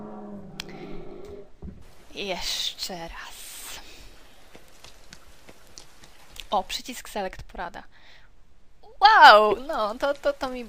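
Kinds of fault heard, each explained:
Bit error spike: a single flipped bit corrupts one sample at 5.67 s, producing an isolated broadband tick peaking near about -26 dBFS, unrelated to the surrounding sound.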